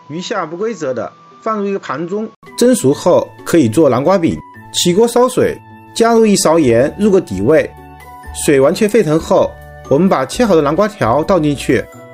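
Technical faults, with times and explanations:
0.00–2.43 s, input switched to a poorer device: the opening stretch sounds boxy and dull, with nothing above about 7.6 kHz, noticeably quieter, and carrying its own faint background noise well under the signal. At 2.43 s there's a gap of about 80 ms, then the sound opens up with full top end and a different background. That's likely the system starting on a lesser microphone or headset profile and then swapping to the proper input.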